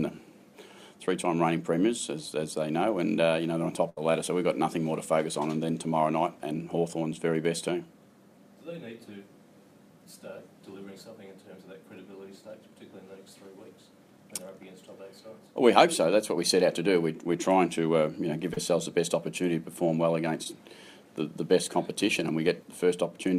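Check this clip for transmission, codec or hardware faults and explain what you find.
There are three transmission faults, all from packets lost on the way to the decoder: one burst of packet loss and two short concealed packet losses.

From 3.89 to 3.98 s there is a burst of packet loss. About 80 ms of audio failed to arrive, and the receiver filled roughly 72 ms by extending the last sound and lowering it as the gap went on. It is heard as a held buzz or fading hiss, after which the sound picks up further along with a section missing.

Short concealed packet loss occurs from 18.54 to 18.58 s and from 20.44 to 20.46 s. Here only about 30 ms and 10 ms went missing, and the receiver covered them with roughly 31 ms and 17 ms of synthesised continuation, built from the preceding pitch or from shaped noise, before blending back into the real signal. Each is heard as a brief smear or wobble.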